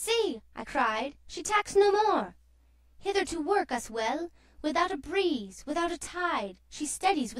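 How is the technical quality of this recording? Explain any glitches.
The whole recording has a rough, slightly doubled quality that never changes, the signature of channel delay (comb filtering). From start to finish, one channel arrives late by roughly 20 ms. When the two are summed to mono, anything common to both cancels at a series of evenly spaced frequencies, starting around 30 Hz and repeating up through the spectrum. With a delay this long, the result sounds rough and slightly doubled.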